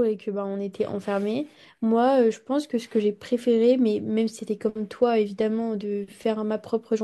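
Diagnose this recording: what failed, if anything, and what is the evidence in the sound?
No failure detected in this recording.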